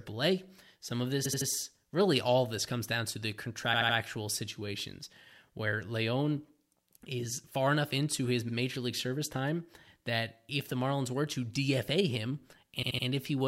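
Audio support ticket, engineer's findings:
Repeated frames at 1.24–1.48 s, 3.73–3.96 s and 12.82–13.05 s: a 78.4 ms block of speech replayed three extra times, each adding 235 ms. At 8.48–8.53 s a 52.2 ms block replays once. Stutter. The decoder is fed the same compressed frames more than once.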